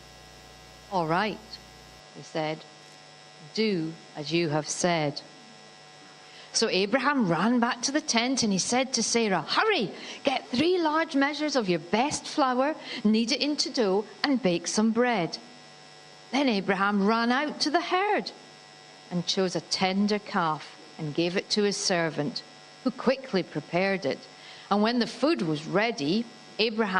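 From 0 to 2 s there is video or display buzz. A screen or video cable couples into the audio. It sounds like a 60 Hz buzz with hash, well below the sound.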